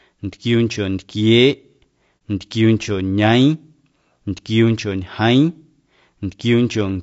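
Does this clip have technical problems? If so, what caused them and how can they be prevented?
Yes. Throughout the speech the sound is rough and grainy, with noise filling the gaps between harmonics and an artificial-sounding top band. This is likely low-delay AAC compression at a low bitrate, around 32 kbps. Short frames resolve pitch poorly. Prevent it by raising the bitrate.

From 2.18 to 2.21 s there is a brief dip of about 30 ms, consistent with a single AAC frame lost and muted. The decoder zeroed that frame, and the overlapping windows faded the sound out and back in. Prevent it with redundancy or packet-loss concealment.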